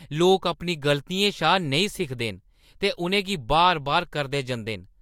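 No technical faults can be heard anywhere in the speech recording. Nothing in the sound points to a problem anywhere along the chain that carried it.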